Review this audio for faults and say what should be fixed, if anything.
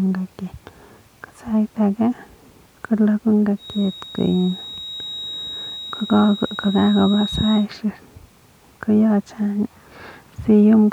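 A feedback whistle runs from 3.55 s to 7.68 s: a thin, steady tone at 3.8 kHz sitting about 15 dB below the speech and swelling and fading slowly in level. The likely cause is a loudspeaker-to-microphone loop held right at the edge of feedback, where one high frequency keeps sustaining without building into a full howl. To prevent it, reduce monitor gain or reposition the microphone and loudspeaker, and notch the 3.8 kHz region in the monitor path.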